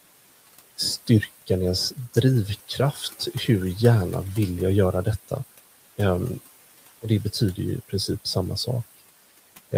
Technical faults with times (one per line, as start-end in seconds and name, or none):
0.00-9.77 noise suppressor artifacts
2.92-3.03 speech cut by the noise suppressor